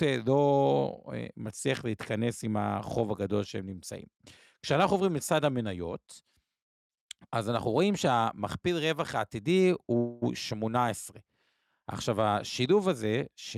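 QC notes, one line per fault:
9.97 to 10.24 s, call audio freeze. The speech halts for 243 ms while its last sound is stretched into a fading buzz or hiss. It then resumes where it stopped, with nothing lost. Likely cause: delayed packets emptied the jitter buffer.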